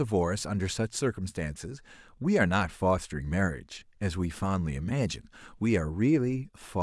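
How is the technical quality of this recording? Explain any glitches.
Nothing stood out as a technical problem on listening to this speech recording.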